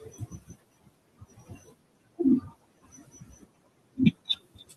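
Speech cut by the noise suppressor runs from 0.0 to 2.2 s and again from 2.41 s to the end. The suppressor treats parts of the speech as noise and pulls them down with the room noise, by up to about 22 dB, so word endings and soft consonants sound swallowed and faint.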